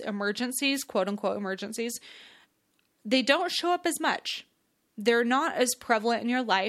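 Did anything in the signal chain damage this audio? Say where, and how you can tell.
Yes. The analogue radio link of a wireless microphone takes two noise hits, at 0.73 to 0.86 s and 3.50 to 3.60 s. Each is a brief swish of static over the speech, about 0.1 s long. That is FM receiver noise rising as the carrier fades when reflected paths cancel.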